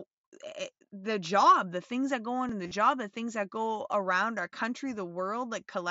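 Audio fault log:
2.64–2.71 s, concealed Bluetooth headset packet loss: after "that go on in", lost packets totalling 52.5 ms (longest run 30 ms) are filled by repeating recent waveform, giving a brief buzz and warble before "the things that go". The waveform shows repeated identical cycles, and the spectrogram shows flat horizontal streaks.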